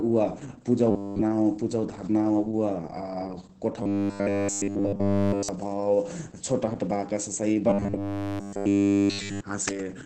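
Throughout the speech, the Opus voice compression is running in its SILK speech mode at wideband, so nothing above about 8 kHz survives, and the excitation is coded very coarsely. That fits a bitrate of around 10 kbps in 20 ms frames. The damage is heavy: the voice sounds muffled and hoarse, with a faintly synthetic, robotic edge.

From 0.91 to 1.22 s, again from 3.83 to 5.49 s, and from 7.70 to 9.42 s, the sound collapses into a rigid metallic buzz at a steady 100 Hz. This is robotic sound from repeated short buffers, most likely because fresh audio stopped arriving in time and the player kept looping its last 10 ms chunk. Essentially none of the real audio comes through in these spans. The buzz follows the original speech only roughly.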